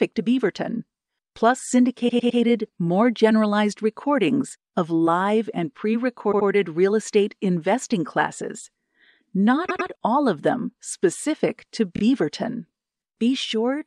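Repeated frames cause stutters at 2.08 s, 6.31 s (after "of live and pre"), 9.68 s and 11.95 s: a chunk of roughly 26 to 105 ms of compressed audio gets played two or three extra times, adding about 0.73 s in total.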